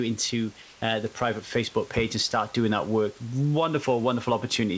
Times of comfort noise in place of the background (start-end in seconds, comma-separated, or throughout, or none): 0.62-0.82